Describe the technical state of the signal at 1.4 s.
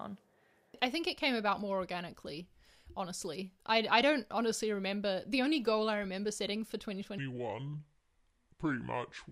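At 1.4 s the speech signal is intact, with no fault present at that moment.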